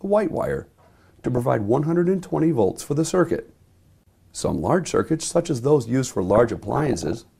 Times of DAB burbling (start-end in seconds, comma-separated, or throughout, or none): 0.64-1.41, 6.28-7.18